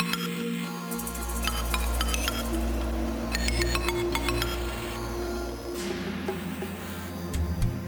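A corrupt frame decoded at 2.91 s gives a brief, quiet glitch from a single damaged frame.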